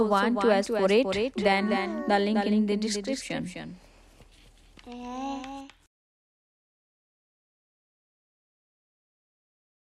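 Every sound is followed about a third of a second later by a dry, full-band repeat about 5 dB quieter throughout, a doubled audio track, likely from a second, slower capture path.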